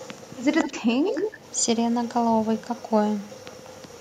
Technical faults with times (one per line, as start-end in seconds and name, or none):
0.62-0.77 echo leak
0.70-1.43 speech suppressed in double talk
1.06-1.30 echo leak